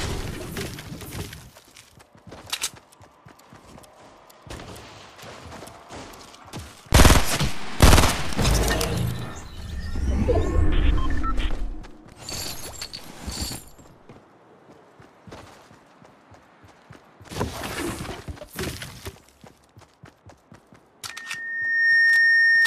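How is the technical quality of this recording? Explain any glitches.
The recording has one clear fault, at the very end. From 21.1 s until the clip stops at 22.66 s there is loudspeaker feedback squeal: a microphone was picking up its own loudspeaker, and at 1.8 kHz the loop gain went above one, so that frequency kept reinforcing itself. It swells from nothing over roughly three-quarters of a second into a steady whistle about 5 dB above the programme. That gradual self-building rise at a single pitch is what separates it from a steady interfering whine, which would sit at a constant level throughout.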